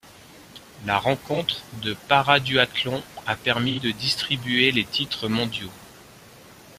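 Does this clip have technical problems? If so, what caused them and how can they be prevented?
Yes, this speech has AAC frame loss with concealment in two places: 1.33 to 1.39 s, a 43 ms gap that fits one lost frame, and 3.68 to 3.79 s, an 85 ms gap that fits two. In each case the decoder patches the hole by reusing the previous spectrum, which sounds smeared, noisy or phasey rather than silent. A plain dropout or buffer underrun would leave a hard gap or click instead. Adding forward error correction or retransmission on the transport would prevent it.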